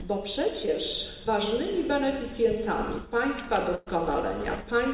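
At 0.66 s there's a short concealed packet loss: about 20 ms of audio didn't arrive in time, and the receiver papered over it by stretching the preceding sound for roughly 11 ms before easing back in. It comes across as a quick smear or wobble.

Later, from 3.75 to 3.88 s, a burst of packet loss takes out about 120 ms. The gap never goes silent. Instead, the last sound is extended and faded for around 111 ms, giving a held buzz or dwindling hiss, and then the audio picks up further along with that stretch simply gone. All of it sits behind a narrow call band with nothing above 4 kHz, which fits G.711 mu-law at 64 kbps.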